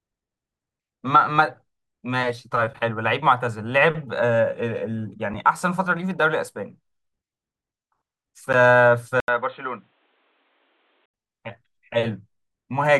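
At 5.34 s and again at 8.53 s the speech drops into a block of digital silence, about 5.3 ms and 10.7 ms long, which fits missed 256- and 512-sample buffers. Each hole has abrupt edges, heard as a sharp tick.

From 9.20 s to 11.14 s the input was likely switched to a poorer device. After an 80 ms silence at the switch, the speech turns dull and boxy with nothing above 4.1 kHz, drops roughly 5 dB, and carries new background noise about 45 dB down.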